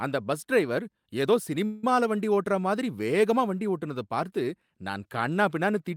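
At 1.65 s the speech halts in a call audio freeze lasting until 1.84 s. The last sound is stretched into a short fading buzz or hiss for about 178 ms rather than dropping to silence. This is likely a jitter buffer running dry while packets were delayed in transit. When delivery resumes, the speech continues exactly where it stopped, so nothing is lost. Instead, a gap has been inserted and everything after it runs 178 ms later.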